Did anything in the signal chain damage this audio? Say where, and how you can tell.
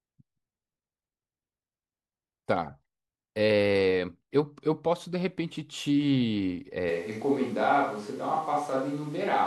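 Yes. From about 6.89 s to the end, the speech abruptly turns roomy and hollow, with the low end thinned out and more background noise, sitting roughly 30 dB below the speech. The level barely changes, which makes the tonal jump stand out. That points to the capture stage: most likely a switch to a distant microphone, where the close mic dropped out and the recording fell back to one further away that picks up far more of the room.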